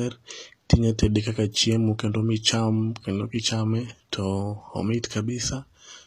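Throughout the speech, the treble was likely rebuilt by HE-AAC compression at a low rate, one that fits about 24 kbps: the codec keeps the lower spectrum and copies it upward. The copied highs don't match the real harmonics, so s sounds turn gritty and metallic.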